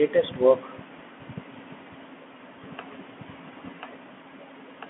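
Throughout, the speech sounds boxed-in and gritty, with scratchy s sounds and a granular hiss beneath it. Nothing reaches past about 3.8 kHz, and the band sits near 200 Hz to 3.4 kHz. This is the Bluetooth CVSD headset codec, consistent with a 64 kbps link, whose one-bit, adaptive-step coding cannot keep pace with loud high-frequency sound.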